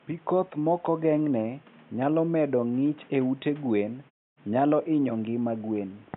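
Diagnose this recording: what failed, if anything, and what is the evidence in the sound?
Nothing failed; no fault is evident in the sound.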